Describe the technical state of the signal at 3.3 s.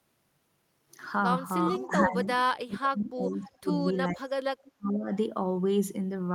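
At 3.3 s the speech sits inside a stretch of speech suppressed in double talk, running from 2.42 to 3.68 s. The level dips, falling by roughly 35 dB at its deepest, for about a second in total. This is likely an echo canceller turning its own talker down along with the loudspeaker echo while both sides talk at once.

Within that dip, from 3.29 to 3.35 s, there is a brief echo leak. A faint copy of the voice returns 423 ms late, about 30 dB below the speech. Some loudspeaker sound picked up by a microphone was probably not cancelled and came back.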